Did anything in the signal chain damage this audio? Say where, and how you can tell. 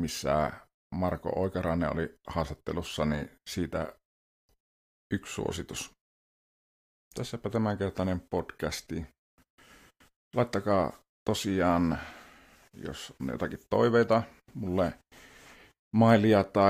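No, nothing in this speech recording stood out on listening as damage from any stage of the signal chain.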